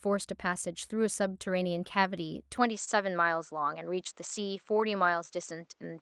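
Clock drift between sender and receiver runs through the whole recording: the sending clock ticks roughly one and a half percent slower than the receiving one, so the jitter buffer keeps drifting toward empty and the receiver has to pad or rework small pieces to keep up. The result is a faint, uneven unsteadiness in the speech timing, small hiccups scattered across the clip rather than any single obvious break.

At 2.57 s the sound changes character and stays that way to the end. The likely cause is the input switching to a poorer device, one that passes nothing above 8.1 kHz. The speech loses its top-end air and turns duller, and a faint new background noise sits well below it. The switch is seamless: there is no silence at the changeover and no jump in loudness, so it registers purely as a shift in tone.

From 2.84 to 2.89 s there is a short stall from a late packet. A packet missed its slot, the jitter buffer ran dry, and the receiver stretched the last sound by 27 ms until the data arrived, then resumed exactly where it left off. 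Nothing is lost, but the sound at that moment hangs on a touch too long, with a slight smeared or buzzy quality.

Between 4.74 and 5.88 s the receiver makes repeated timing corrections to absorb the slower sender, playing the material at 97 percent speed and inserting around 40 ms in total through small repeated pieces, all pushing the same way at irregular spacing. The speech here drags slightly and its rhythm wobbles, heard as a loose, uneven tempo with the odd tiny stutter rather than a clean slowdown.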